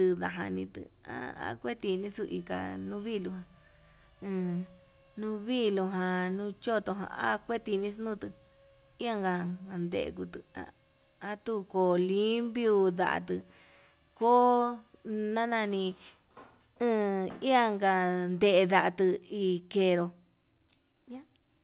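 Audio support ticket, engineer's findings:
No faults found in recording.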